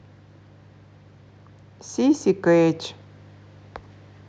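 No technical faults are audible.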